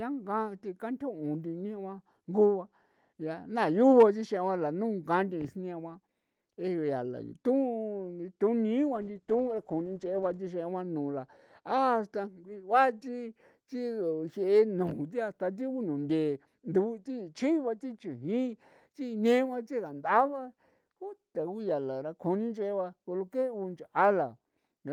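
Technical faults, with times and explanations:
8.99–10.51 s, call bitrate drop: the speech turns rough and watery, and the top end dulls compared with the 12 kHz band you hear elsewhere through the Opus call path. That points to the bandwidth estimate dipping and the encoder being squeezed from around 40 kbps to roughly 13 kbps. At that rate Opus codes much more coarsely and cuts off the highs. It stays at the bottom for about 1.5 s before the rate recovers.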